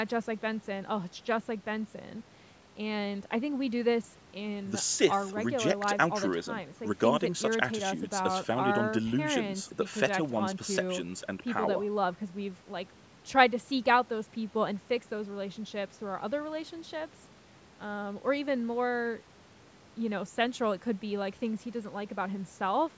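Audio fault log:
No faults are present in this speech clip. It has passed through a call's microphone processing, which trims the lowest bass and leaves nothing above 8 kHz.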